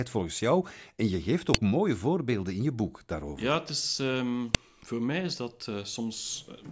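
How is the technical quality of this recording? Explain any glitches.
The recording has two sharp, loud clicks in this speech, one at 1.54 s between "je geeft" and "mooie voorbeelden in je", and one at 4.55 s just before "voor mij is dat". Both are a file header played as audio. The pieces, about 3 s long, were joined with their WAV headers intact, so those bytes play as a brief burst of samples. Unlike a random digital click, these land exactly 3 s apart at piece boundaries, regardless of the speech.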